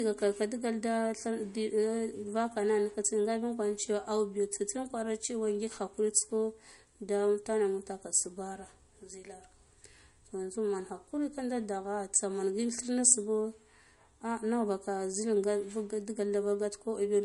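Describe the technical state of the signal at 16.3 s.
At 16.3 s, as throughout the speech, the likely cause is low-bitrate audio saved at a high bitrate. An earlier MP3 pass, which fits around 48 kbit/s, discarded detail that the later high-rate MP3 cannot restore, so nothing sounds above 11.2 kHz and the speech lacks air.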